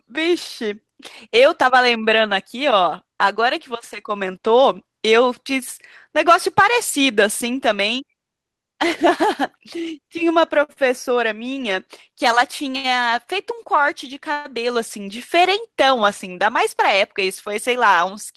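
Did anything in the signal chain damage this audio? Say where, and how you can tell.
Yes. Short stalls from late packets at 10.63, 10.73 and 12.76 s: at the network/jitter buffer, the receiver stretched sound for 53, 37 and 74 ms, holding it briefly before resuming.

Call audio freeze at 14.32–14.48 s: a 123 ms gap filled with a fading buzz or hiss and no silence, likely from packets held up in transit emptying the jitter buffer.

Jitter buffer speed-up from 16.94 to 18.34 s: the receiver trimmed pitch periods, about 50 ms in all, so the audio runs 4% fast at unchanged pitch.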